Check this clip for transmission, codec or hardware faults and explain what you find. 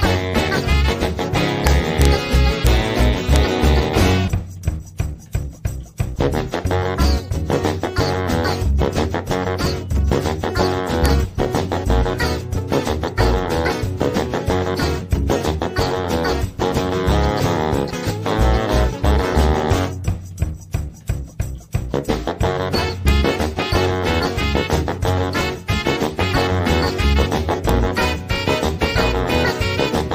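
There's one fault here, integer overflow. It spans 1.67 to 2.05 s and recurs as single hits at 2.67, 3.36, 11.06, 23.08 and 27.69 s. Peaks right at full scale wrap to the opposite sign instead of limiting, so each one snaps into a harsh crack, nastier than clipping.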